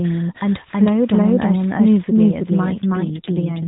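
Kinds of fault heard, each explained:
Doubled audio track: Throughout the clip a second full-band copy of the speech trails about 300 ms behind the first, at roughly the same level. Every syllable gets a clean, dry repeat with no decay or room colour. Because the copy runs from start to finish, you never hear it cut in or out. The likely cause is the signal being captured a second time over a slower path and mixed back in with the original.
AMR rate drop: From 2.84 s to the end at 3.68 s, the mobile codec steps down from 12.2 to 5.9 kbps. That's the kind of switch a network makes on a weak radio link, giving up speech bits to protect against errors. The band stays at the same narrowband ceiling and nothing drops out, but the voice turns rougher and more synthetic than the lightly coded AMR-NB before it.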